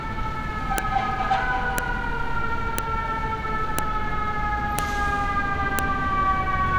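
At 0.78, 1.78, 2.78, 3.79, 4.79 and 5.79 s, a file header played as audio gives a sharp snap every 1.0 s, where joined pieces kept their header bytes. Each shows as a thin full-height vertical line on the spectrogram and a lone spike in the waveform.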